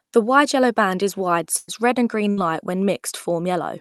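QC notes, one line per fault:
1.57–1.69 s and 2.31–2.38 s, burst of packet loss: the receiver stretched the last sound over gaps of about 104 ms and 64 ms, turning it down as each gap went on before the speech jumps ahead. In the spectrogram, smeared, decaying bands end at an abrupt seam; the Opus call path's content stops near 12 kHz.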